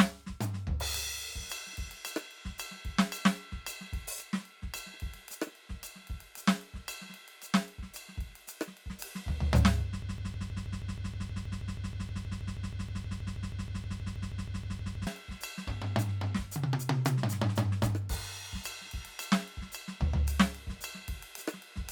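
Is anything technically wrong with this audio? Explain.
Yes. The music falls into a broken-record loop from 10.02 s to 15.07 s. A fragment about 159 ms long repeats exactly, back to back, 32 times. The result is a rapid, mechanical stutter with an even rhythm that replaces the music for five seconds. Normal playback resumes at 15.07 s. The likely cause is a stalled player, encoder or stream that kept resending the last piece it held. The music that belonged in that span is missing.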